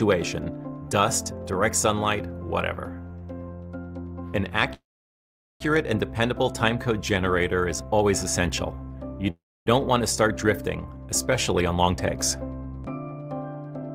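A call audio freeze runs from 4.73 to 5.62 s: the last sound is briefly continued as a fading buzz or hiss, then about 790 ms of silence. The audio resumes where it stopped, with nothing lost, leaving an 869 ms gap, likely because delayed packets drained the jitter buffer. A second call audio freeze at 9.30 to 9.68 s behaves the same way, with a 359 ms gap, about 270 ms of it silent.

A jitter buffer speed-up follows from 11.78 to 12.17 s. The receiver trimmed repeated short pitch-period slices to shed excess buffered delay, removing around 50 ms in total, so the sound plays at 110% speed with unchanged pitch and comes across as hurried.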